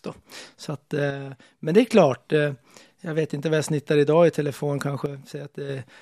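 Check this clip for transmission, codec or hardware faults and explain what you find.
Two dropouts stand out. From 1.11 to 1.93 s, just before "eh jag vet inte", and from 5.06 to 5.69 s, after "snittar idag i telefon", the speech abruptly falls about 6 dB, likely one channel dropping out before the mono sum. The waveform shows a sudden step-down in amplitude, and the spectrogram dims evenly across all frequencies.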